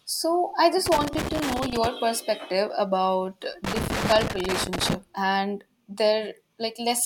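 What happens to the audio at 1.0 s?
Loose connector crackle runs from 0.86 to 1.87 s, after "I just": a worn contact rapidly breaks the signal, giving irregular scratchy bursts rather than evenly spaced digital clicks.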